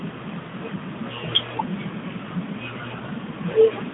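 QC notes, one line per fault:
Nothing to flag here, just speech coming over what sounds like an ordinary narrowband mobile line with the top end stopping a little below 4 kHz, and nothing in it calls for a QC note.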